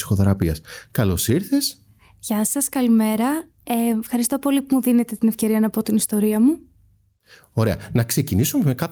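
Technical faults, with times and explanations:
Throughout: gain pumping. The level swings roughly 10 dB, likely from excessive gain driving a fast limiter that pulls it down on each loud syllable.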